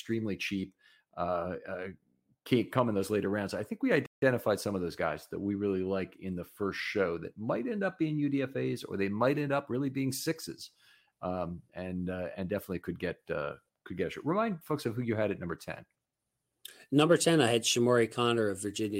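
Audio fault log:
4.06–4.22 s, playback stall: the speech cuts to silence for 0.16 s mid-flow, then picks up again, likely the player briefly running out of data.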